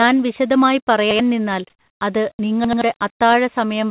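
At 1.11 to 1.20 s, just before "നിന്നാൽ അത്", a repeated buffer occurs: new audio missed its deadline, so an 85 ms piece plays a second time, which fits a 4096-sample buffer. The identical fragment twice over, with a hard join, gives a short stutter, and about 100 ms of real speech never arrives. The exact repetition of content is what separates it from a dropout or a gap filled with noise.

From 1.7 to 2.0 s, comfort noise in place of the background takes over for 300 ms. The real background, sitting about 49 dB below the loudest speech, is swapped for a steady, featureless hiss roughly 8 dB quieter. The likely cause is discontinuous transmission: the sender stopped sending during the pause, and the receiver synthesised noise. Unlike a repeat, nothing recognisable recurs. Only the texture of the room goes flat.

At 2.36 to 2.39 s, right after "നിന്നാൽ അത്", sound dropped by the voice detector removes about 20 ms of the speech itself, which gives way to 30 ms of that same smooth noise before the sound resumes. 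The likely cause is the detector mistaking that sound for background. Here actual speech is clipped, whereas the previous fault only replaced background.

At 2.65 to 2.82 s, again after "നിന്നാൽ അത്", a second repeated buffer plays the same 85 ms piece three times in all. It is a longer triple stutter, losing about 150 ms of new audio. The call path's narrowband codec, with nothing above 4 kHz, leaves all of this sounding telephone-dull.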